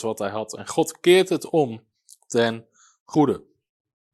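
At about 3.13 s, right after "keert het om ten", the speech jumps forward and there's a brief garbled blip lasting until roughly 3.16 s, a short glitch instead of clean speech. It sounds like a broken MP3 bit reservoir: a chunk of frames likely went missing, so the next frame reached back for borrowed data and decoded someone else's bytes. The glitch's length fits roughly one 24 ms frame.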